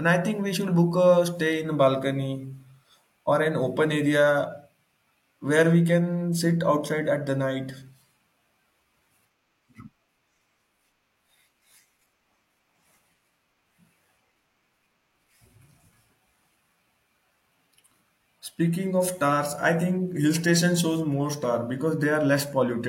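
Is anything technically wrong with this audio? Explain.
Yes. From 4.24 s to the end, the speech switches to an adaptive stream at a lower bitrate. A slowing connection forced a cheaper encoding. The treble drops, nothing remains above 16.3 kHz, and artefacts rise. This fits a switch from 96 kbit/s AAC-LC to 32 kbit/s HE-AAC. The change is abrupt, without a gap.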